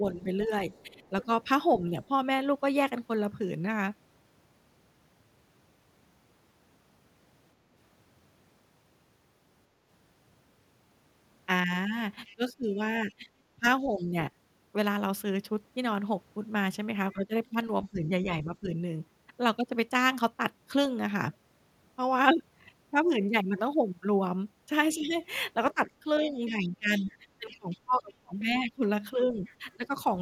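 Double talk at the opening, from 0.0 to 1.92 s, likely confused the echo canceller: with both sides talking, it could not tell the local talker from loudspeaker echo and pulled the whole signal down. The result is speech suppressed in double talk, with the voice dipping by up to about 15 dB across a few hundred milliseconds. Over the same stretch, 0.14 to 2.08 s, the canceller likely also failed to remove all of the far end, so the other side's voice leaks through faintly, roughly 30 dB under the talker.

The same pairing returns from 12.27 to 13.95 s, where a trace of the far-end voice sits about 30 dB down. From 12.35 to 14.15 s the talker is pulled down for about a second in total, with drops near 20 dB.

From 17.13 to 18.69 s, suppression alone pulls the voice down for under a second, by up to about 15 dB.

The longest episode runs from 24.95 to 29.9 s, with dips up to about 20 dB adding up to around two seconds. 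Inside it, from 25.11 to 29.76 s, the leaked far-end voice is stronger, around 25 dB below the talker.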